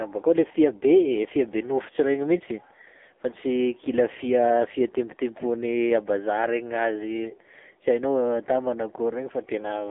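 Throughout, the speech sounds buzzy, synthetic and boxed in, band-limited to roughly 250 Hz–3.5 kHz: heavy AMR narrowband mobile codec damage, consistent with a low bitrate near 6.7 kbps.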